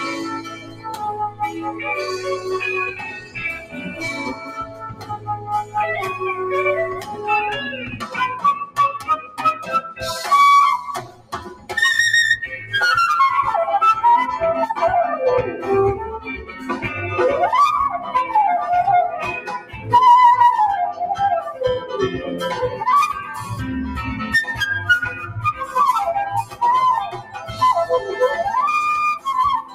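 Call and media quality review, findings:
Noise suppressor applied to music or sounds, throughout: speech-tuned denoiser left active, treating sustained tones, ambience and reverb as noise. Gain swings by around 10 dB, so held sound pumps and thins while onsets pass. Spectrogram: sustained horizontal partials and decay tails fade or break into patches, with transient columns intact. Waveform: envelope dips shortly after each attack, then recovers unevenly.

Sound cut by the noise suppressor: 0.13–5.76 s (deepest about 15 dB, roughly four seconds affected), 6.94–9.39 s (about 15 dB), 11.01–11.72 s (about 16 dB), 16.19–16.63 s (about 9 dB), 19.59–19.87 s (about 12 dB), 21.51–21.89 s (about 7 dB), 25.15–25.74 s (about 6 dB), 26.44–27.61 s (about 12 dB). Mechanism: steady or fading material classed as noise, attenuated harder than the rest, tails truncated. Spectrogram: darkened bands over these spans, decay tails cut short.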